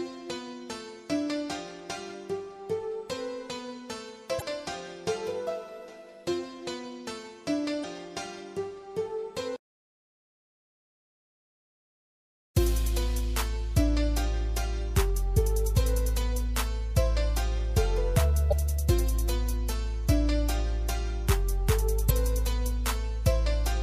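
Damaged data in a compressed stream shows up four times, at 4.38 to 4.42 s, 7.80 to 7.84 s, 18.48 to 18.53 s and 22.06 to 22.11 s, each a brief disruption of about 44 ms breaking into the audio. At these points part of the encoded stream was corrupted, so the decoder misread or rejected those frames, lost sync and searched for the next valid frame header before resuming playback.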